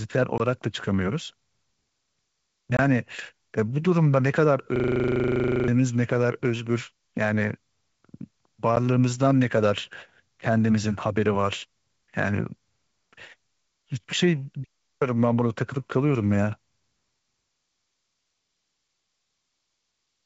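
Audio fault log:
0.38–0.41 s, 2.77–2.81 s and 8.76 s, packet loss on an ADPCM call: sharp-edged gaps of about 20, 20 and 10 ms, which fits one or two lost packets each. The decoder's predictor and step size lose sync, so the speech comes back with some brief distortion before settling.
4.76–5.68 s, system hang loop: a single 40 ms slice of audio repeats 23 times, giving a stuttering buzz at 25 Hz. The machine stalled while the sound hardware kept cycling the same buffer, and about a second of real speech never arrives.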